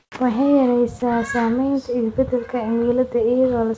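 Right from the start, 0 to 0.12 s, the background isn't the real room sound but comfort noise in its place: a flat, featureless hiss with none of the texture of the actual background, and about 2 dB quieter than what follows. The background sits roughly 51 dB below the loud parts. That's likely discontinuous transmission: the sender went quiet while its voice detector heard nothing, and the receiver papered over the gap with synthetic noise shaped roughly like the room.

Overlapping the tail of that, from 0.10 to 0.12 s, the onset is clipped by the voice detector. About 20 ms of the speech's soft beginning is simply missing, so the first sound jumps in abruptly, straight out of the comfort noise. The detector was likely slow to notice speech had resumed, so those first moments were never sent. Everything sits under 8 kHz, which fits a wideband codec like G.722 on the call path.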